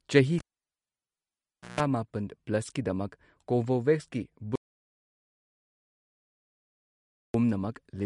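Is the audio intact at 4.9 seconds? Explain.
No. An audio dropout to silence runs from 4.56 to 7.34 s, covering 4.9 s. The sound cuts off mid-flow into silence with no room tone for about 2.8 s, likely because the input was lost while the recorder kept writing silence.

MP3 compression damage is also present at this point and across the whole clip. Nothing sounds above 11.2 kHz, and the audio has a plainly audible watery swirl with smeared attacks. This likely comes from an MP3 encode starved for bits, which fits a rate of around 42 kbps.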